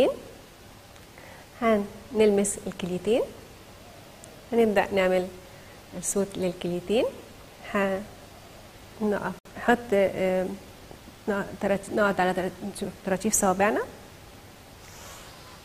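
At 9.39 s, a gap at a join of encoded pieces: encoder padding inserts 64 ms silence; sound resumes where it stopped, unlike a dropout.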